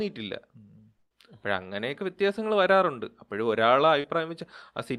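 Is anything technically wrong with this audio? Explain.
Yes, there are two transmission faults in this speech clip, both from audio that failed to reach the receiver in time.

From 0.97 to 1.13 s there is a burst of packet loss. Roughly 140 ms of the stream never arrived, so the receiver extended the last sound it had for about 132 ms, fading it down before a stretch of silence near 50 ms. You hear the sound drawn out into a dying buzz or hiss, then speech picks up further along with that portion gone.

From 4.01 to 4.06 s there is a short concealed packet loss. About 40 ms went missing, and the decoder covered the hole by continuing the preceding sound for around 32 ms before blending back into the real signal. The result is a brief smear or wobble in the speech rather than an audible gap, and a quick consonant there can disappear.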